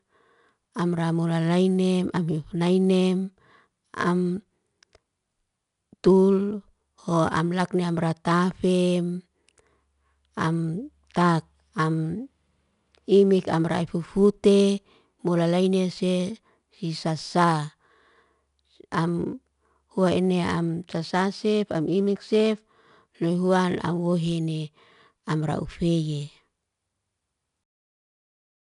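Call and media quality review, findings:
4-bit ADPCM compression, throughout the speech. The symptom is a gritty hiss riding on every loud syllable, rising and falling with level, with rough edges on sharp onsets where the adaptive step lags. On a spectrogram, a grainy noise floor fills the gaps between harmonics in loud passages, with a hard ceiling at 10.6 kHz, which fits a sample rate near 22 kHz at around 89 kbps. In the waveform, peaks look fuzzy and attacks lag. Probable component: legacy encoder in the capture or transcode path.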